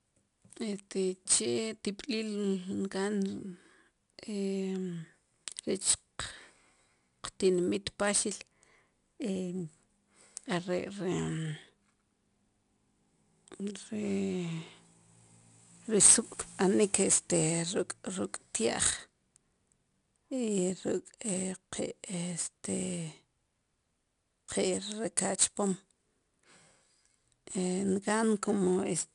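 From start to finish the speech carries 4-bit ADPCM compression: each sample is coded as a coarse step from a prediction, so a gritty hiss rides along with every loud syllable and sharp onsets smear. Nothing reaches above 10.6 kHz, which fits roughly a 22 kHz sample rate.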